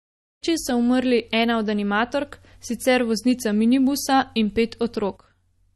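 From the first moment to the end, the speech carries MP3 compression artefacts, plainly audible even through the smooth fade-in at the start. Nothing sounds above 12.1 kHz. The top end stops at that fixed point. The encoder likely ran short of bits, at a rate that points to around 40 kbps. It dropped the treble and zeroed weak frequency lines. These switch on and off between frames. The result is a watery, swirling texture.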